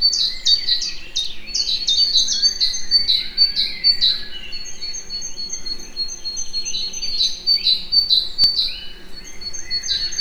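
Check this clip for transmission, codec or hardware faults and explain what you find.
Two brief blocks of digital silence interrupt the audio, at 1.07 s and 8.44 s. Samples drop to silence with no fade, about 0.7 ms for the first, which fits a 32-sample block, and about 2.2 ms for the second, heard as clicks. The waveform shows flat-line gaps, and the spectrogram shows thin vertical broadband stripes.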